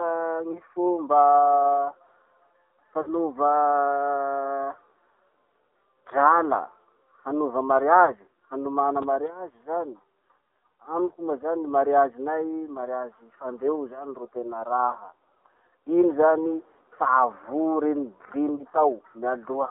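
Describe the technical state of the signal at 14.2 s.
At 14.2 s the speech carries AMR narrowband mobile codec coding, which runs through the whole clip. The signal sits in a telephone band of 250 Hz to 3.6 kHz with nothing above. The codec rebuilds speech from a vocal-tract model excited by a few pulses per 5 ms subframe, and the plainly audible buzzy, synthetic texture fits a low AMR-NB rate near 7.4 kbps.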